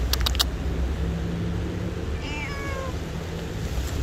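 A mains buzz runs through the whole clip, a steady raspy hum sitting roughly 20 dB below the sound itself. Switching spikes from a dimmer, rectifier or poorly shielded cable enter twice per 50 Hz mains cycle, so the buzz is built on a 50 Hz fundamental with harmonics climbing into the kilohertz range. On a spectrogram it appears as evenly spaced horizontal lines at multiples of 50 Hz across the full length, and the waveform shows a regular 100 Hz spiky ripple underneath.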